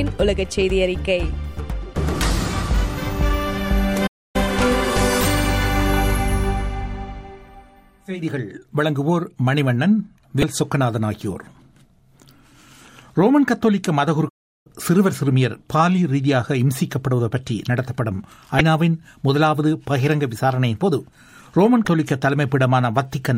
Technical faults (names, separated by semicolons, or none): playback stall; damaged data in a compressed stream